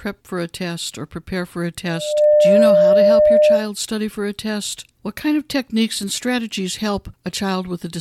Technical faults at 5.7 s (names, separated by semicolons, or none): none